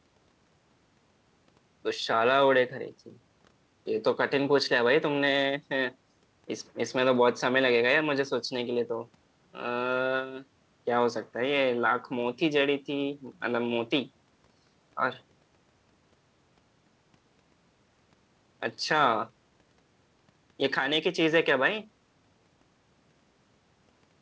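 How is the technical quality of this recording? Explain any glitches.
No glitches or faults heard.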